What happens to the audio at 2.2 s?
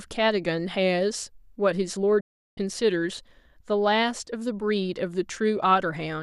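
A digital broadcast dropout runs from 2.20 to 2.58 s. The receiver stopped getting decodable frames, likely a run of about fifteen failing their checks, and muted itself. The speech fades out within about 8 ms, then stays silent for roughly 360 ms before returning, with that stretch lost.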